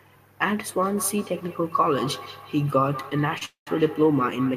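From 0.82 s to the end, feedback echo between two devices sets in. Each word returns about every fifth of a second, peaking about 13 dB below the speech, thinner and ringing.

At 3.38 s a short stall from a late packet holds a sound for 29 ms. The buffer ran dry, so the receiver stretched the last sound.

From 3.45 to 3.68 s comes a call audio freeze. A fading buzz fills 215 ms, with 120 ms of silence. Packets were likely held up, emptying the buffer.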